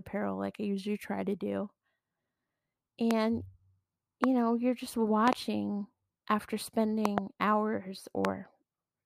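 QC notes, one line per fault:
3.11–3.13 s, 4.24–4.26 s, 5.28–5.35 s, 7.05–7.20 s, 8.25–8.27 s: loud pop. These are sharp transients peaking about 20 dB above the speech, doubled at 5.28 s and 7.05 s, with speech continuing underneath. They are likely voltage pulses from a connector, switch, static or driver glitch, shaped by downstream circuitry.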